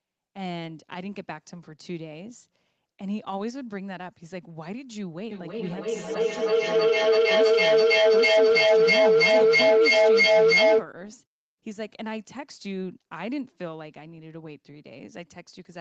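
From 5.31 s to 10.93 s a feedback echo between two devices appears. A second device in the room replays the call and the other device's microphone picks it up again, which no echo canceller removes. The speech returns roughly every 0.3 s, thinner and ringing, piling up to about 14 dB above the direct speech.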